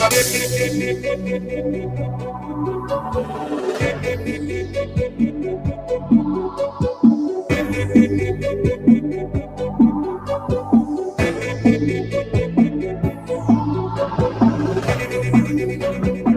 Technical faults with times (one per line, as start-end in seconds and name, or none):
0.00-16.37 noise suppressor applied to music or sounds
2.18-2.52 sound cut by the noise suppressor
4.67-5.19 sound cut by the noise suppressor
9.43-9.60 sound cut by the noise suppressor
13.12-13.29 sound cut by the noise suppressor